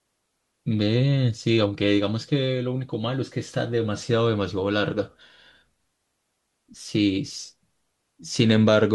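No technical faults can be heard anywhere in the recording.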